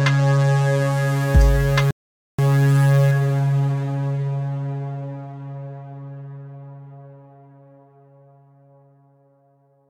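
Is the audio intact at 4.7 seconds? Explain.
Yes, at 4.7 seconds the music plays through intact, with no dropout, click, distortion or other fault to be heard.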